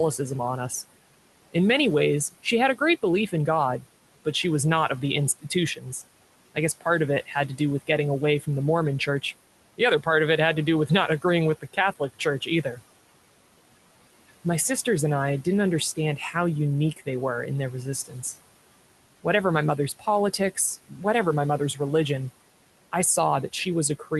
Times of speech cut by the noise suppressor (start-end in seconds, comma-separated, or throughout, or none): 0.18-12.81, 14.86-17.07, 18.04-18.24, 19.24-21.80, 22.92-24.12